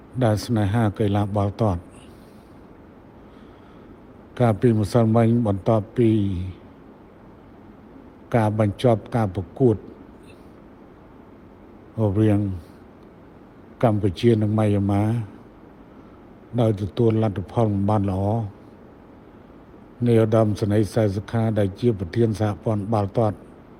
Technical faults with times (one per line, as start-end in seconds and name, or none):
none